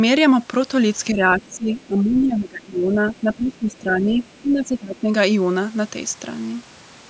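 Speech suppressed in double talk runs from 1.12 to 4.22 s: the voice sinks by as much as roughly 20 dB for about three seconds. The likely cause is an echo canceller that, with both ends talking at once, could not tell this talker apart from the loudspeaker echo and pulled both down together. Inside that stretch, the other side's voice leaking through appears as brief scraps at 1.49–1.56 s, 1.74–1.86 s and 3.07–3.20 s, then again at 4.17–4.38 s. These are most likely residual far-end sound from the loudspeaker that the canceller did not fully remove from the microphone. Most are very faint, some 35 dB under the talker. The scrap at 3.07 s is louder, around 25 dB down. A second bout of speech suppressed in double talk follows at 4.42–5.11 s, with a shallower dip of roughly 15 dB lasting about 0.7 s. This has the same likely cause: the suppressor clamped down while the two voices overlapped.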